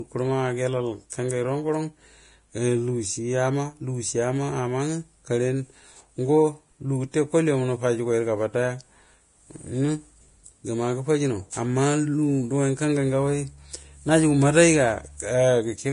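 All the way through, the speech has a hissy, grainy top end with nothing above about 10.5 kHz, and edges of consonants sound smeared. That's likely heavy Vorbis compression, roughly what you'd expect at around 30 kbps, with treble detail swapped for noise.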